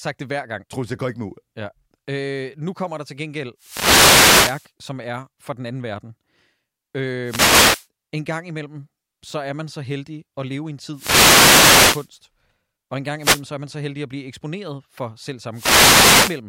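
The analogue FM link from a wireless microphone fades as reflected radio paths cancel, so receiver noise swells over this speech clip as bursts of static, a wireless microphone noise hit, at 3.58–4.71 s (after "kommer der til gengæld"), 7.23–7.87 s, 10.92–12.10 s (after "at leve i en"), 13.19–13.43 s and 15.52–16.41 s (after "blive eksponeret for selv").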